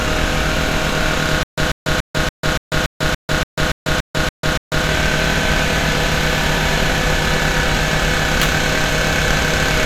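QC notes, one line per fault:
1.43–4.86 s, stutter with silent gaps: playback likely stalled and retried, replaying its last fragment each time before running dry. A 139 ms burst repeats 12 times at an even 286 ms pace with 146 ms of digital silence between, and the intended audio is lost.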